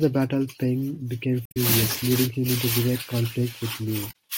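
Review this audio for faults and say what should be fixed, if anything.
Two short bursts of damaged data in the compressed stream disrupt the speech. The first runs from 1.43 to 1.57 s and adds about 4 ms to the timeline. The second runs from 4.07 to 4.14 s. Each sounds like a brief chirp, squawk, click or short hole. Corrupted bytes made the decoder misread those frames, lose sync and hunt for the next valid header. To prevent it, verify file or stream integrity with checksums and keep metadata out of the audio frames.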